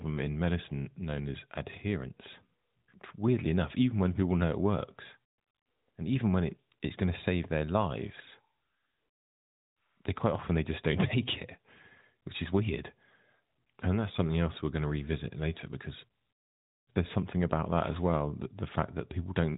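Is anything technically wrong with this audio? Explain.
No, nothing here is technically wrong.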